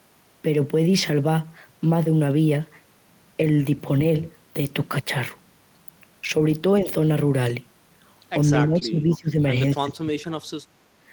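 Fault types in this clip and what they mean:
lost packet rebuilt from error correction: Single packets failed to arrive, and the decoder rebuilt each one from the low-bitrate copy carried in the following packet. There is no gap, but each 20 ms patch comes out coarser and noisier than the sound around it. These rough blips fall at 0.97, 3.87, 7.05, 8.81 and 10.19 s.
speech suppressed in double talk: The likely cause is an echo canceller that could not tell its own talker from loudspeaker echo while both sides spoke, so it turned the near-end speech down. The speech briefly sinks by about 10 dB from 6.82 to 6.91 s, then by about 15 dB over roughly a second from 8.55 to 9.55 s, and hardest, by about 25 dB, from 9.74 to 10.33 s.
short concealed packet loss: About 20 ms of audio missed its playout deadline at 8.79 to 8.83 s. The receiver extended the preceding sound for 17 ms to cover the hole and then blended back into real audio. 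That shows as a brief smear or wobble, sitting inside the long suppressed stretch and overlapping one of the error-correction rebuilds, so the damage there is stacked.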